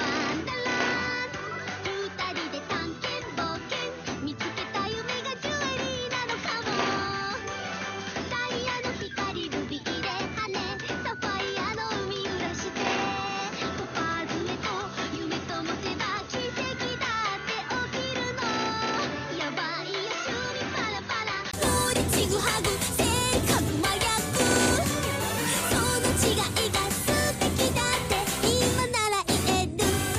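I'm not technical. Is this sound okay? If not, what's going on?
No. Until 21.53 s the sound is muffled and quieter, then briefly drops out and clears up, likely an input switched to a poorer device.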